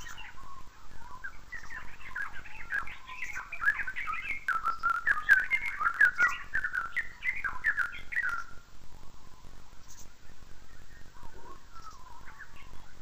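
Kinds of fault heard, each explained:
Interleaved audio read as planar: Throughout the clip the sound plays an octave low and doubled, with a choppy pulse repeating at 45.9 Hz. Each 21.77 ms block holds alternating left and right samples, but its first half was taken as one channel and its second half as the other. Each half is stretched across the full block, which halves the pitch, and the restart at every block boundary sets the pulse rate.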